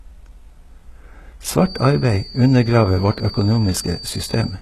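Speech throughout, and the whole thing carries heavy HE-AAC compression damage: nothing survives above about 12.3 kHz, and the treble has that rebuilt, metallic edge where s sounds go gritty. It's likely a very low bitrate encode, something around 16 kbps, with band replication faking the top end. From 1.54 s to the end there's also a thin feedback whistle at 4.6 kHz, sitting well under the speech and swelling and fading slowly, likely a speaker-to-mic loop parked just short of full howl.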